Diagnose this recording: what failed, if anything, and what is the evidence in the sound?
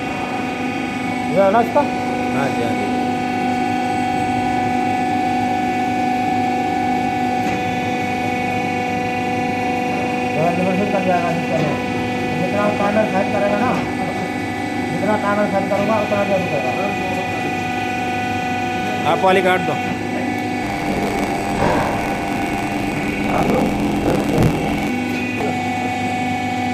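Buffer tearing at the driver or buffer stage, from 20.62 to 24.91 s. A robotic buzz at 43.1 Hz rides on the sound, which fits a 1024-sample buffer. Writer and reader have slipped. About half of each buffer replays audio around 50 ms old, with hard joins.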